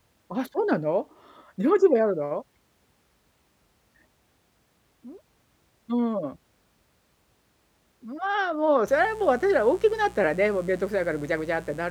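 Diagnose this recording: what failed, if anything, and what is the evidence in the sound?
The analogue wiring failed, letting in a mains buzz. From 8.86 s to the end of the speech clip, a steady, raspy buzz sits under the speech, roughly 25 dB below it. Its pitch is built on 60 Hz, with harmonics reaching well into the kilohertz range. That points to interference from a dimmer, a rectifier or a missing shield. Each mains cycle injects two sharp switching spikes, and those spikes produce the rasp.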